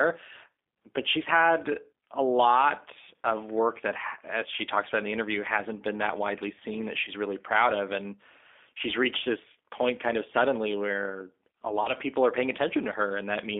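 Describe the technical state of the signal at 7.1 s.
Between 7.05 and 7.11 s, just after "that widely seen that" and before "really proud of", the stream dropped about 20 ms of audio, which fits a single lost packet. This is VoIP packet loss concealed by the speech codec. The decoder filled the gap by extrapolating from its last pitch and filter settings while lowering the gain. The patched sound comes out as a brief, fading, stretched smear, and because each frame builds on the one before, the voice stays weak or distorted for tens of milliseconds or more beyond the gap itself.

Underneath, the G.729 codec is active here as it is across the whole clip. At 8 kbit/s it rebuilds speech from a vocal tract filter, a pitch predictor and a few pulses per frame rather than the original waveform. Its damage is plainly audible at this moment, with a rough, synthetic edge. The line band of about 250 Hz to 3.6 kHz removes the lowest bass and everything above 3.6 kHz, so the sound is thin and muffled.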